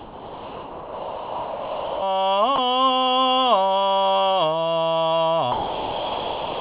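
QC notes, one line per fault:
0.00–2.02 s, 2.56–2.58 s and 5.52–6.61 s, sound dropped by the voice detector: the music gives way to a steady, featureless noise bed for about 2 s at the start, a brief 20 ms gap, and the final 1.1 s. This is likely a sending-side voice detector treating the music as background and halting transmission, with the receiver filling in comfort noise. The band-limited call path, with nothing above 4 kHz, carries the music between these gaps.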